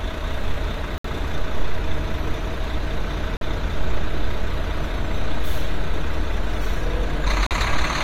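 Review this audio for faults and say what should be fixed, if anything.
Corrupt frame muted at 0.98–1.05 s, 3.37–3.43 s and 7.47–7.52 s. The decoder rejected damaged compressed frames and the player inserted silence, producing abrupt gaps of a few frame lengths that show as flat waveform and blank vertical stripes. To prevent this, protect the stream with error checking and retransmission, or use concealment instead of muting.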